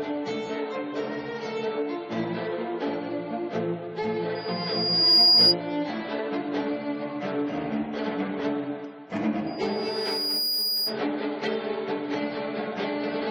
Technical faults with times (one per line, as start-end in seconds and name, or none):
4.35-5.55 loudspeaker feedback squeal
9.46-10.99 loudspeaker feedback squeal